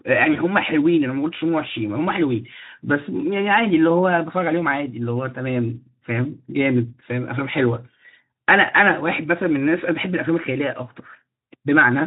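At 0.33 to 0.40 s there is VoIP packet loss concealed by the speech codec: one 20 ms frame of the Speex stream is missing. The decoder bridges it by extending the previous pitch and spectral shape at falling gain, giving a brief buzzy or noise-like smear that stays weak until about 0.40 s.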